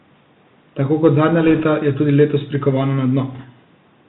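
Throughout, the speech sounds boxed-in and thin, with nothing above about 4 kHz, scratchy s sounds and a fine granular hiss underneath. This is the Bluetooth CVSD headset codec, whose one-bit up-or-down coding, which fits a 64 kbps stream, can't keep pace with loud high-frequency detail.

From 1.48 to 1.64 s, and again from 3.33 to 3.45 s, a rushing, crackly noise washes over the speech without any sharp clicks. These are bit errors on a Bluetooth voice link, at roughly one and a half percent and then about one percent. Each flipped bit nudges the signal only slightly and fades, so the damage smears into noise.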